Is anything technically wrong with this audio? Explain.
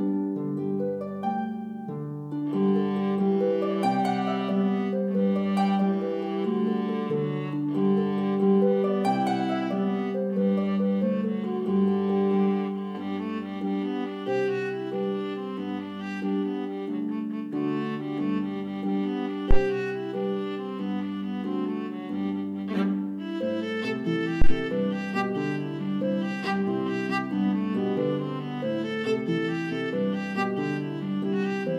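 Yes. Two deep, brief thumps stand out, at 19.51 to 19.62 s, settling in about 24 ms, and at 24.42 to 24.58 s, settling in about 37 ms. These are phantom power thumps, from a supply being switched on a live input and its voltage step passing through the coupling capacitors.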